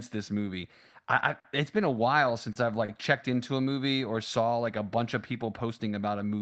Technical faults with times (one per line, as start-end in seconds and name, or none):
1.39-1.47 short stall from a late packet
2.52-2.58 short stall from a late packet
2.85-2.91 short stall from a late packet